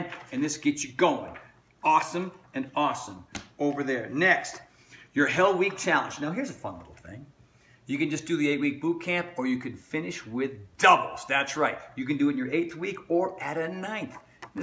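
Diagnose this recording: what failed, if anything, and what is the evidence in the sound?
Nothing in the signal chain points to a failure: the level, continuity and timing hold steady throughout, with no sign of trouble at any stage from capture to playback.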